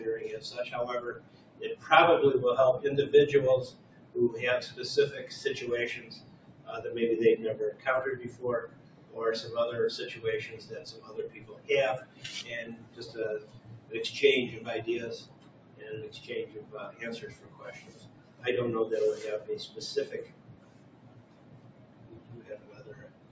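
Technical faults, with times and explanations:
Throughout: noise suppressor applied to music or sounds. The level keeps pumping and fluttering, with held tones and decaying tails thinning out while attacks come through mostly intact. A suppressor tuned for speech stays active on this material and treats sustained content and ambience as noise, so its gain swings by something like 20 dB as it decides, moment to moment, what to keep. The audio, which carries nothing above 8 kHz from the call's microphone processing, never sits at a stable level.
1.15–1.84 s, 3.7–4.15 s, 6.0–6.68 s, 7.73–9.16 s, 10.16–13.91 s, 15.21–18.44 s and 19.69–23.31 s: sound cut by the noise suppressor. In each stretch the sound sinks, by about 10 dB at its deepest, and sustained or fading parts get clipped short instead of ringing out. The spans are longer later in the clip, and the last one runs to the end. Here the suppressor has judged the steady content to be noise and pulled it down harder than its surroundings.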